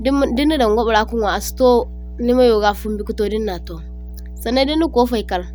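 A ground loop or nearby transformer is coupling the 60 Hz power line into this speech recording, leaving mains hum throughout: a steady low drone only around 15 dB below the voice.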